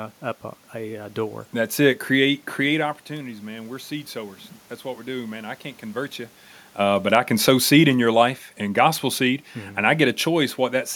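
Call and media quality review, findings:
Voice and room noise swell together, 3.08 to 6.1 s, about 4 dB up. Automatic gain rising: AGC reacting to input that fell about 14 dB after the talker moved back around 2.5 s, slowly raising gain, background included.

Level sinks gradually, voice and room noise together, 6.78 to 10.58 s, about 4 dB down. Automatic gain falling: talker moved around 6 s, AGC judging input too loud and easing gain down over nearly four seconds.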